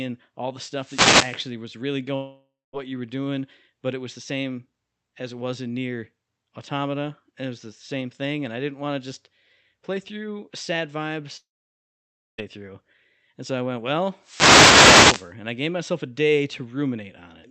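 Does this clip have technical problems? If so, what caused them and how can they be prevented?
Yes. Wireless microphone noise hits at 0.75–1.47 s (after "all the") and 14.21–15.34 s (after "so i went well") are brief static swishes caused by the FM radio link fading from reflections. Prevent them with diversity receivers and clear line of sight.

At 2.15–2.75 s and 11.37–12.40 s (after "just play through sad"), sound smears into fading buzz, then silence, resuming with roughly 0.58 s and 1.02 s missing. The likely cause is a long network dropout. Prevent this with a wired or more stable connection and deeper jitter buffering.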